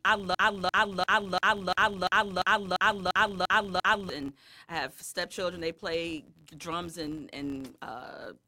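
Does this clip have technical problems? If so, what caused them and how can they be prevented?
Yes. A filter in the processing chain is restarted on every block, losing its state and starting each block from silence. That leaves a small transient at each block boundary, heard throughout as a buzz at 86.1 Hz that tracks the speech level, which fits a 512-sample buffer. Carrying the filter's state over from one block to the next prevents this.

From 0.35 to 4.10 s there is a broken-record loop, likely caused by the player, encoder or stream stalling and resending the last fragment it held. A 345 ms piece of speech repeats exactly eleven times, back to back, and the speech that belonged in that span is lost before "and I have" follows. Detecting a stalled buffer and resynchronising or muting, instead of replaying stale data, prevents it.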